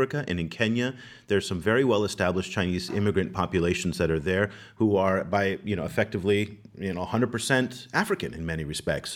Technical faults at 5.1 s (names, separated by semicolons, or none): hard clipping